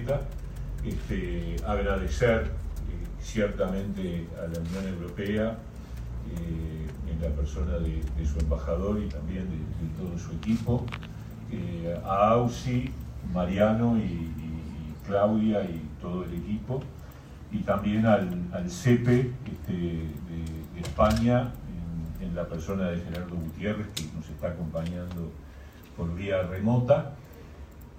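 No technical faults can be heard anywhere in the recording.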